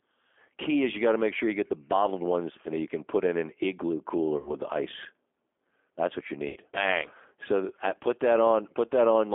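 G.729 codec compression runs through the whole recording: the speech is rebuilt at 8 kbit/s from a vocal tract filter, a pitch predictor and a few pulses per frame, confined to a 300 Hz to 3.5 kHz line band, so it sounds plainly rough, thin and slightly synthetic.

VoIP packet loss concealed by the speech codec occurs at 4.38 to 4.52 s, after "put in an igloo" and before "the ice", and again at 6.48 to 6.59 s, after "what you". Each gap is 80 ms, which fits four 20 ms packets. The decoder stretches its last pitch and filter into a fading buzzy tone or coloured noise, and the voice stays weakened briefly after the audio resumes.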